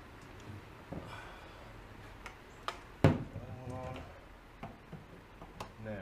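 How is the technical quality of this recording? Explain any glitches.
Three short clicks mar the recording, at 3.05 s, 4.05 s and 5.21 s. They are likely dropped samples: at each point the stream lost a fraction of a millisecond of data, so the waveform jumps straight from one value to a later one with nothing in between. That gap is far too brief to take away any audible sound. What remains is the sudden step itself, heard as a single sharp click and seen as a thin vertical line across the spectrum.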